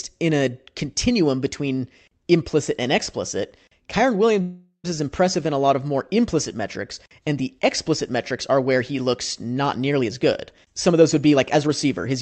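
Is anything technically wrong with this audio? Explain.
Yes, there are two faults.

A call audio freeze runs from 4.41 to 4.86 s, just before "is impressive in a". Likely stalled packets drained the jitter buffer, so the receiver stretched the last sound into a fading buzz or hiss, with about 90 ms of silence at the end. The sound then resumes where it stopped, with nothing lost but about 0.42 s of added delay.

A jitter buffer speed-up runs from 9.99 to 12.16 s, after "where he looks not". The receiver trimmed small pitch-period slices again and again to shed excess buffered delay, roughly a third of a second in total. The speech plays at about 113% speed with unchanged pitch and sounds hurried.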